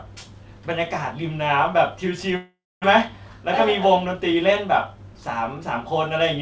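From 2.36 s to 2.86 s the speech breaks off: the last sound is stretched into a buzzy tail that fades, and about a quarter of a second of near silence follows before the speech resumes with roughly 400 ms simply gone. This is a long network dropout, most likely a run of packets that never arrived. The receiver filled the gap by extending what it last had, then gave up and went quiet, coming back slightly later than before.

Between 3.85 s and 4.52 s the speech sounds a little hurried while keeping its pitch, running at about 105% of normal speed. This is a jitter buffer speed-up. After packets had bunched up, the buffer held more audio than it wanted, so the receiver trimmed out short slices one or a few pitch periods long, removing around forty milliseconds in total to bring the delay back down. Throughout the clip, the G.722 call path keeps nothing above 8 kHz.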